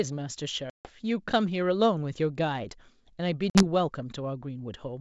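Speech over a G.722 wideband call, with packet loss on an ADPCM call at 0.70 to 0.90 s (150 ms lost) and 3.50 to 3.63 s (50 ms lost). Each hole cuts hard to silence. Speech then returns slightly distorted while the decoder's predictor recovers.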